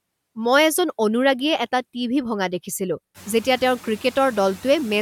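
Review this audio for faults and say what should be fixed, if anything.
Noise suppressor artifacts run through the whole clip. Frame by frame, the suppressor pulls down each band it judges to be steady noise by about 17 dB. The noise dips between phrases and swells under the speech. This is heard against room noise that climbs about 23 dB around 3 s, to sit about 18 dB below the speech. To prevent it, reduce the suppression depth or use a smoother gain tracker.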